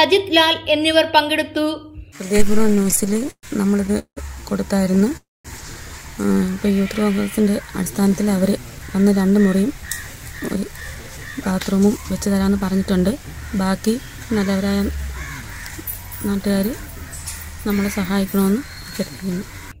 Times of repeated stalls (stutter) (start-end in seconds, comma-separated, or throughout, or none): 2.53-4.19, 4.85-5.13